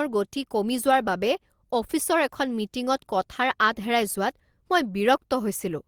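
Packets were lost at 0.87 to 0.93 s, which fits two packets, and at 2.47 to 2.49 s; each was a lost packet rebuilt from error correction, played from the next packet's low-bitrate copy. There's no gap, but those stretches of speech turn briefly rougher and noisier.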